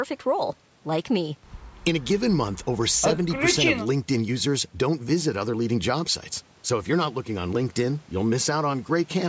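No technical faults can be heard in the speech: its signal path matches ordinary call microphone processing, with the lowest bass trimmed by the usual high-pass filter and no content above 8 kHz.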